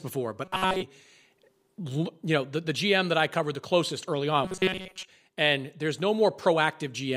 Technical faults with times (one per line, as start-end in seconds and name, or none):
0.45-0.82 robotic sound from repeated short buffers
4.44-5.08 robotic sound from repeated short buffers